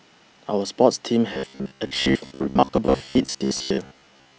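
Speech, with robotic sound from repeated short buffers from 1.33 s to the end at 4.38 s: a rigid, metallic buzz at about 67 Hz, likely because new audio arrived too seldom and a segment of roughly 15 ms was replayed to fill most of the time, skipping the real audio.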